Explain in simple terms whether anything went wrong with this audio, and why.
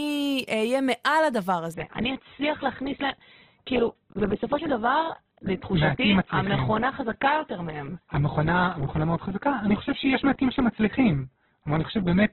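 From about 1.74 s to the end, the speech suddenly turns dull, with nothing above about 4.1 kHz, so the crisp sounds at the top are gone. There's no gap or dropout, just an abrupt drop in quality. This is an adaptive stream at a lower bitrate: the connection slowed, so the player switched to a much more heavily squeezed version of the same audio, trading clarity for keeping playback going without interruption.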